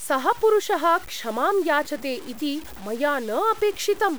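From start to finish the speech appears to have been reduced to very few bits and cut down without dither, most likely low bit depth without dither, with truncation to around 6 bits. Because the rounding error tracks the waveform instead of spreading as steady hiss, the speech carries a grainy, buzzing distortion that shifts with every syllable, sitting only about 20 dB below the signal, and the quietest stretches drop to silence or sputter between steps.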